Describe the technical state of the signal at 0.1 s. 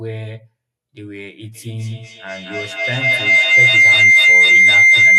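At 0.1 s the speech signal is intact, with no audible fault present at that moment.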